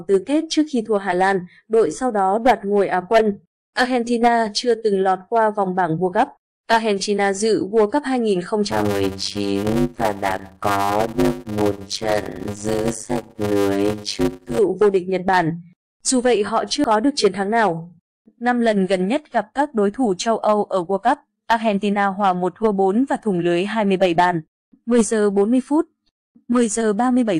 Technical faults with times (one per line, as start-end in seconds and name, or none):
8.70-14.59 block size mismatch (padded)
16.84 compressed frames skipped